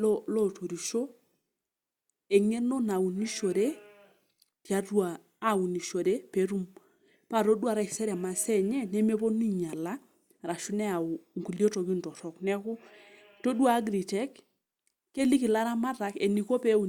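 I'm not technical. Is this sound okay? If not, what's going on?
Yes, nothing in this speech recording points to a technical fault.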